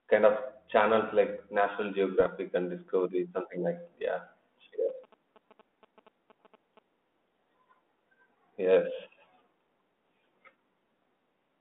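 Bit errors on an ADPCM link strike between 2.20 and 2.30 s, just before "and discovery". Flipped bits corrupt the decoder's step-size and predictor state, so each error keeps ringing for a few milliseconds. The spread of damage fits a handful of consecutive frames and an error rate of a few tenths of a percent. It sounds like a cluster of pops and a rough, gritty burst with brief jumps in level, set against the band-limited 200 Hz to 3.5 kHz line sound.

GSM signalling bursts run from 4.89 to 6.79 s. A nearby 2G phone is exchanging short groups of radio bursts with the network, as it does when setting up a call or a message, and the audio circuitry rectifies that RF into the signal. The result is a galloping dit-dit-dit of short buzzes at about 217 Hz, sitting roughly 25 dB below the speech.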